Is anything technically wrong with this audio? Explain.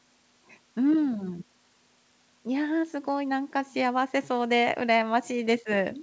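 No, nothing stood out as technically wrong on listening to this speech.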